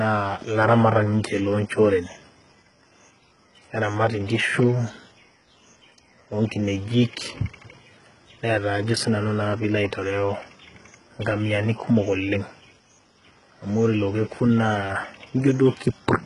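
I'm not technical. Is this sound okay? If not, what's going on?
No. All the way through, this speech has the heavy damage of HE-AAC compression, likely from squeezing it very hard. Rather than sounding merely muffled, the treble stays bright but is rebuilt from lower sounds, so s sounds turn gritty or lispy, with nothing above about 11 kHz.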